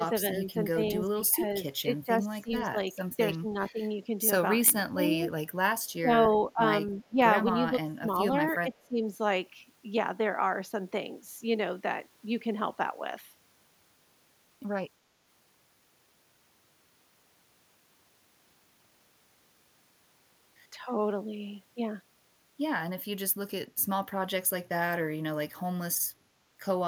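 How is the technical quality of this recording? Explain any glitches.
The recording has two kinds of glitches in its first nine seconds.

Speech suppressed in double talk occurs from 0.0 to 3.8 s, 4.63 to 5.1 s and 5.9 to 9.02 s. The speech dips in pieces, by up to about 15 dB in the first span and about 20 dB in the later two, affecting roughly 2.9 seconds in total. This is likely an echo canceller turning everything down while both sides talked at once. On a waveform the envelope shows sudden notches, and a spectrogram shows the energy thinning.

An echo leak appears from 6.87 to 7.07 s. A faint delayed copy of the speech, about 25 dB below it and trailing by 297 ms, comes through briefly. It was likely left behind when a loudspeaker-side echo canceller failed to remove all of its microphone pickup. A spectrogram would show a weak, shifted ghost of the speech's harmonic pattern, barely visible against the direct signal.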